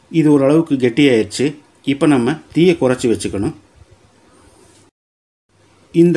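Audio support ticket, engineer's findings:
Resampler restarted on every block, 3.5 s to end: 50 Hz buzz riding on signal, from independently resampled 20 ms blocks, 48 to 24 kHz. Edge errors recur every 20 ms; spectrogram shows 50 Hz-spaced vertical striations, waveform small steps at block boundaries.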